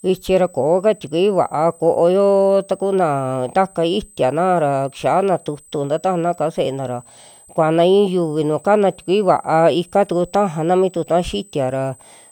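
A thin, high whistle sits under the speech for the whole clip, about 30 dB below it, wandering between roughly 8.0 and 8.2 kHz. This is a switching supply whistle: a power supply running in an audible burst mode or beating with another one, its frequency shifting with load.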